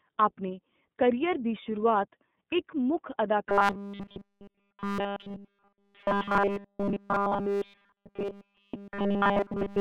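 Speech that sounds thin, slightly rough and synthetic throughout, confined to roughly 150 Hz to 3.6 kHz, points to the iLBC codec, coding each frame independently at a rate that fits its 30 ms mode. From 3.49 s to the end at 9.81 s, the voice turns into a rigid metallic buzz at 200 Hz, most likely robotic sound from repeated short buffers, with nearly all real audio replaced by a 5 ms segment looped over and over.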